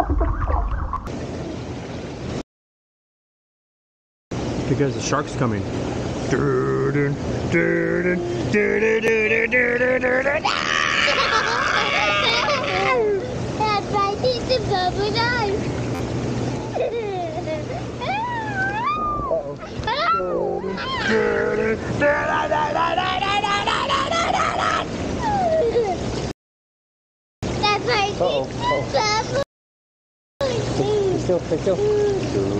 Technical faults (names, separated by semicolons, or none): repeated buffer; rebuffering stall